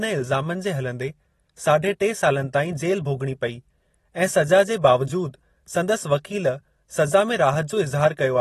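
Throughout, the speech stops at 12.5 kHz and sounds plainly smeared and warbly, likely AAC compression, which fits a bitrate near 32 kbps.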